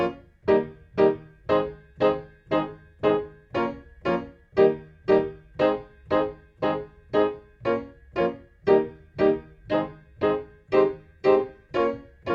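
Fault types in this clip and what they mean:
Nothing stood out on listening to this recording of sounds.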